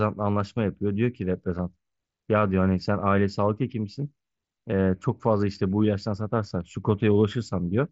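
Concealed Bluetooth headset packet loss at 1.58 s and 4.71 s: about 7.5 ms, then 15 ms, patched with repeated recent waveform, so the first, a single lost frame, is nearly hidden, and the second, two frames, gives a brief buzzy tone with a small warble where real audio returns.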